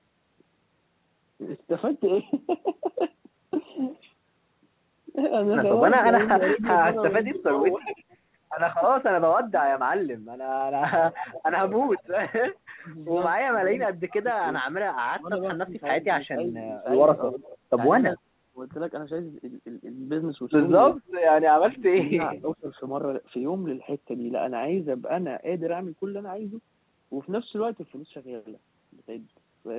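From 6.32 to 9.53 s the speech keeps ducking, by about 25 dB at worst and for around a second in total. That's likely speech suppressed in double talk: both ends were talking, and the echo canceller turned everything down. At 7.71 s a faint echo leak slips through about 0.40 s behind the speech and about 30 dB down, likely loudspeaker pickup the canceller didn't fully remove. From 11.13 to 12.02 s a stronger echo comes back, 0.37 s late and about 15 dB down. Between 12.81 and 18.59 s the ducking returns, dropping by up to about 30 dB for some 2 s in all, with a 0.41 s echo from 17.3 to 17.58 s. Finally, 20.98 to 22.69 s dips by about 30 dB for roughly 0.7 s, and an echo 0.45 s late and about 25 dB down sits at 22.35 to 22.56 s. The top end stops at 4 kHz throughout, which fits a G.711 call line.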